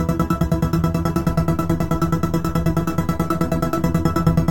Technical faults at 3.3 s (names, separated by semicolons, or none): DC step